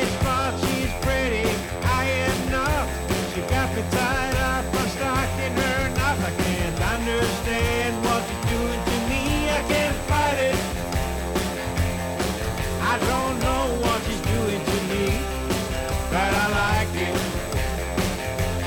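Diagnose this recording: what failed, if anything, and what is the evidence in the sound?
USB whine throughout: a steady 8 kHz tone, roughly 25 dB under the signal, from the bus's 125-microsecond microframe current leaking into analogue power or ground.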